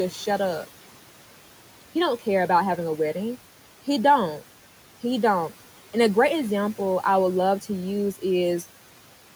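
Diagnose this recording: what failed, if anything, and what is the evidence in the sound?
Noise suppressor artifacts from call processing, throughout: the room noise sinks about 12 dB between words and rises under them, unlike a gate's abrupt silence.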